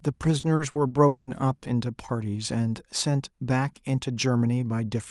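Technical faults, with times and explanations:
0.39–1.30 s, repeated packet loss (robotic sound): the speech turns choppy, with five holes, the longest 200 ms, covering about 40% of the stretch. Lost or late packets left gaps, each patched by stretching the preceding sound, so pieces vanish.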